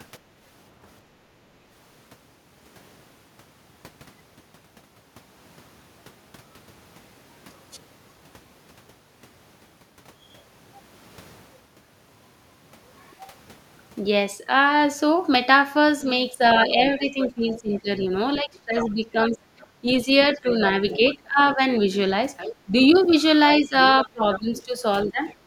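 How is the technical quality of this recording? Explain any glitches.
The recording has clear echo-control problems, concentrated in the second half of this speech clip.

Background gated by the echo canceller, 1.05 to 1.32 s: while the loudspeaker was active the canceller pulled the microphone down, and the room sound dips by about 11 dB for around a third of a second before recovering.

Speech suppressed in double talk, 16.3 to 21.59 s, 22.66 to 22.73 s and 23.6 to 25.2 s: the talker's level drops intermittently, by roughly 20, 10 and 15 dB. The likely cause is the canceller attenuating both voices when it can't separate local speech from echo.

Other side's voice leaking through, 16.76 to 18.06 s, 18.78 to 21.54 s, 22.37 to 22.56 s and 23.09 to 25.33 s: a second voice sits roughly 15 dB under the talker. This is likely residual loudspeaker echo that the canceller failed to remove.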